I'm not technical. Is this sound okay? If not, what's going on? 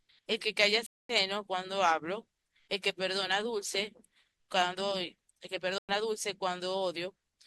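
No. There are two stream reconnects, at 0.86 to 1.14 s and at 5.78 to 5.92 s. The connection dropped, the speech went silent for about a quarter second and then a tenth of a second, and the player restarted and came back slightly later in the speech, skipping a little.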